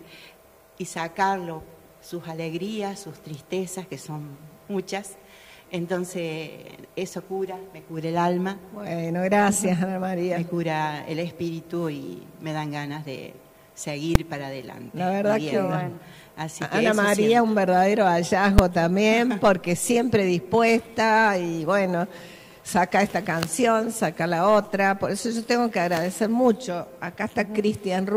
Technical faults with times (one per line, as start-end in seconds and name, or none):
14.15 invalid numbers at full scale
18.58 invalid numbers at full scale